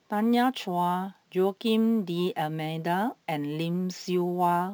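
From start to finish the speech carries a crude rate conversion: samples were simply repeated to reach the new rate, with no interpolation or filtering, a pattern that fits a step from 32 kHz up to 44.1 kHz. The uneven repetition adds inharmonic tones roughly 30 dB below the speech, heard as a gritty fizz that rises on loud and sibilant sounds. Unlike steady hiss or dither noise, it disappears in pauses.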